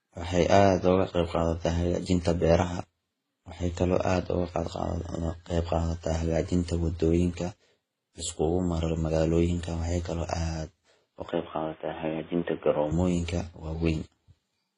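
Transcoding between lossy codecs runs through the whole recording. The speech has nothing above 10.4 kHz and carries three layers of coding artefacts at once, heard together. The likely cause is a chain of low-bitrate encoders, with the mix pointing to something like WMA, then Vorbis, then HE-AAC at around 20 kbit/s. Each stage re-encoded the previous stage's damage, and the narrowest band limit carried through to the end.

Input switched to a poorer device from 11.29 to 12.92 s. For this stretch, the speech suddenly turns dull and boxy, with nothing above 3.6 kHz. A fresh layer of background noise appears, roughly 30 dB below the speech. There is no gap at the changeover and the loudness stays about the same, so the change is heard purely as tone and noise. This is likely the system dropping to a narrowband input, such as a headset's call profile, before switching back.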